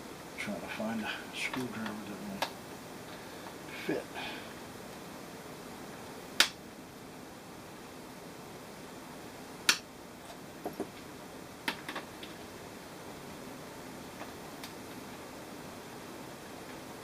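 At 9.80 s a tiny sliver of sound, about 20 ms, drops out with a jump. This is likely audio missing between chunks, lost at a 2-second chunk boundary.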